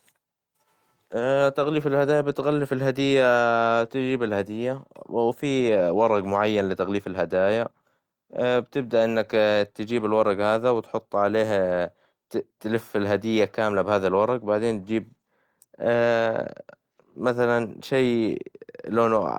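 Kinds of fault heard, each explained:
No technical faults can be heard in this recording.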